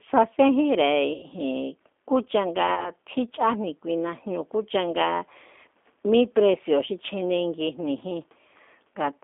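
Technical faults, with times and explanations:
Throughout: G.729 codec. The speech is squeezed into a narrow phone band of about 250 Hz to 3.5 kHz, so it sounds thin. At 8 kbit/s it is rebuilt from a filter, a pitch predictor and a few pulses. That leaves it plainly rough and synthetic.
1.14 to 1.27 s: VoIP packet loss concealed by the speech codec. About 90 ms of audio went missing. The decoder carried its last pitch and filter forward and faded it, giving a stretched sound that dies away. Recovery lags, so the speech stays weak briefly afterward.
2.75 to 2.90 s: VoIP packet loss concealed by the speech codec. A shorter gap of about 30 ms was filled the same way. The sound smears and fades. Because each frame builds on the last, the distortion lingers past the gap itself.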